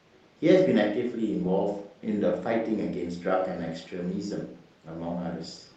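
No technical faults can be heard in the speech, which comes through the call codec as expected.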